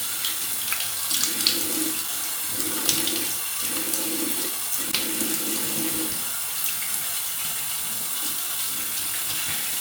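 At 2.02 to 2.09 s, an irregular burst of loose connector crackle cuts through the sound. A second, longer burst follows from 4.83 to 5.02 s. A worn contact is making and breaking. It chops the signal into scratchy crackle.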